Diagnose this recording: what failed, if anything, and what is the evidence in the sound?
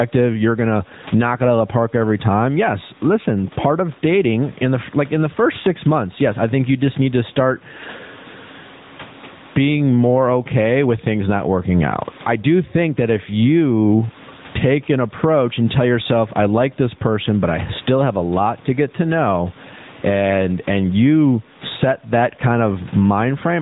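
Gain pumping runs throughout. The room noise sits about 37 dB below the speech, and the gain swings by roughly 15 dB. The likely cause is input gain set far too high, with a fast limiter clamping each peak.

The codec stage shows plainly audible AMR narrowband mobile codec damage across the whole clip. Nothing passes above 3.8 kHz. The voice has a buzzy, synthetic edge, and the pumping background becomes a swirling warble. This fits AMR-NB's vocal-tract model running at around 10.2 kbps.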